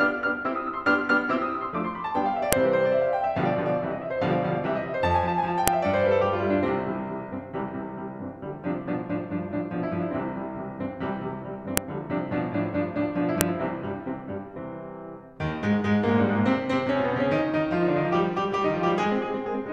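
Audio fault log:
2.53, 5.68, 11.77 and 13.41 s: file header played as audio. Each is a sharp, loud snap over the music, where a joined WAV piece's header bytes were played as samples.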